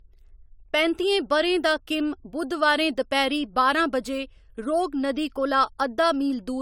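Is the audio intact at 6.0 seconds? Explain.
No. At 6.0 s, as throughout the clip, the speech sounds swirly, hollow and smeared, with blurred consonant onsets. This is likely generation loss: the AAC audio was re-encoded about three times, each pass adding fresh quantisation noise and spectral holes, which fits a 64 kbit/s chain.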